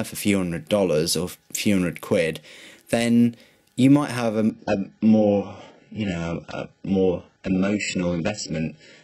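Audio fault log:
4.50–9.04 s adaptive stream at a lower bitrate: the sound switches abruptly, with no gap, to nothing above 8 kHz, pointing to a very low-bitrate HE-AAC stream rather than a dropout.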